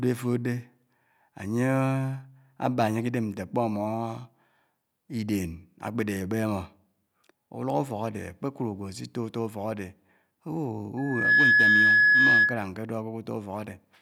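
At about 10.97 s a loudspeaker feedback squeal kicks in: a steady 1.7 kHz tone that swells up in a fraction of a second and sits roughly 10 dB above the speech. The mic is hearing its own speaker, and the loop runs away until it stops at 12.69 s.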